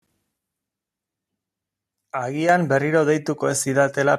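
At 2.49 s the microphone volume is stepped up by about 7 dB in one jump, as the call software raises the device's input gain. Voice and background noise get louder together, which separates it from a speaker simply talking louder.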